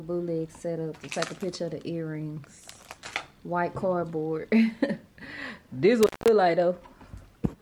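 Around 6.03 s the audio drops out with a crackle, and it doesn't properly come back until about 6.28 s. That's a classic intermittent contact, where a loose plug or cable lead briefly lifts off its contact and the signal path opens. The gap itself runs roughly 195 ms, with only faint hiss underneath while the line is open. Then there's another crackle as the connection scrapes back into place.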